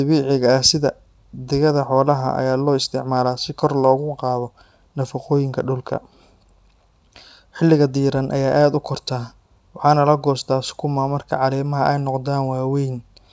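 No audible faults in this speech recording.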